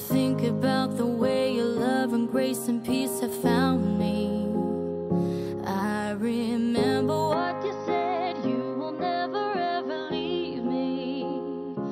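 At 7.33 s the sound abruptly turns duller and boxier, and stays that way to the end. It looks like the input switched to a poorer device, likely a different mic or a headset's call profile taking over. Nothing above about 5.9 kHz survives, the level drops by roughly 5 dB, and a new, faint noise floor comes in around 50 dB down. There's no gap at the changeover, just a sudden change in tone.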